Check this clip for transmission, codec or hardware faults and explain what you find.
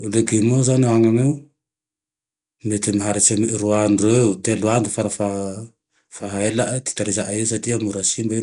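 One codec fault runs through the whole clip. Throughout, the speech has a rough, hissy halo and a smeared, underwater quality, likely from Nellymoser compression at a rate fitting about 44 kbps. Empty bands are noise-filled, and a spectrogram shows grainy smearing and a hard ceiling at 10.7 kHz.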